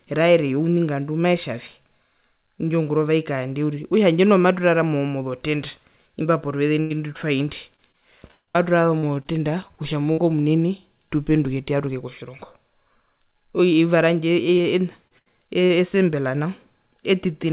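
At 6.80 to 6.92 s a burst of packet loss cut about 100 ms out of the stream, and the receiver stretched the last sound across the hole, so the last sound hangs and fades before the speech resumes further on. Starting at 7.76 s, repeated packet loss (robotic sound) sets in: five gaps up to 8.57 s, the longest 161 ms, with a third of that span patched, then six shorter gaps of up to 57 ms between 8.99 and 10.20 s, leaving choppy speech with pieces missing. Later, short concealed packet loss fills holes of a few hundredths of a second at 14.58 to 14.66 s (two back to back), 15.08 to 15.12 s and 15.66 to 15.72 s, each heard as a brief smear or wobble. Between them, at 15.18 to 15.28 s, a second burst drops about 80 ms behind a short fading extension. Throughout, the call path passes nothing above 4 kHz, which fits a G.711 A-law codec.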